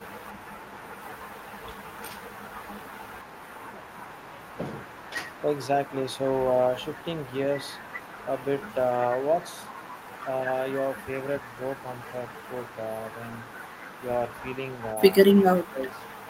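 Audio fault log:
15.5–16.15 s, speech suppressed in double talk: the speech level dips sharply, by roughly 15 dB at its deepest, for under a second near the end. The likely cause is an echo canceller that, with both sides talking at once, attenuated the near talker along with the echo.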